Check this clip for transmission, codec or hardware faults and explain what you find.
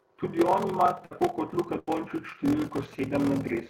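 The clip has three faults: a steady buzz with slowed delivery throughout the speech, two short dropouts, and radio interference near the end.

Block size mismatch (padded) runs for the whole clip. One stage writes shorter blocks than the 1024-sample blocks the next stage reads, and the remainder is zero-filled. This produces a 43.1 Hz buzz at the block rate and speech running at 0.861 times normal speed with timbre unchanged. A wrong sample rate would shift pitch instead.

A burst of packet loss occurs twice, at 1.05–1.13 s just after "on ima" and at 1.79–1.89 s. The receiver extends the last sound, a fading buzz or hiss lasting 53 ms and then 84 ms. Speech resumes about 60 ms and 80 ms further on, with material skipped. This distinguishes it from a plain mute.

GSM signalling bursts run from 2.66 s to the end, about 20 dB below the speech. A nearby 2G phone's radio bursts are rectified by the audio circuit into a galloping dit-dit-dit of short 217 Hz buzzes. 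This intermittent pattern separates it from steady mains hum.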